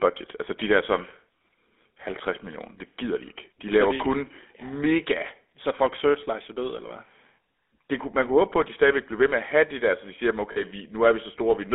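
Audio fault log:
throughout — GSM full-rate codec: the speech is rebuilt from a vocal-tract model fed by regular pulses that keep only every third excitation sample, which gives the plainly audible buzzy, gravelly roughness. The band of roughly 250 Hz to 3.6 kHz fits the 13 kbps full-rate coder.
10.52–10.63 s — lost GSM frames: just after "der så de siger", damaged frames are covered by repeating the last good frame's settings, so the sound hangs briefly in a rough, metallic ring. The gap fits about two lost frames, around 40 ms.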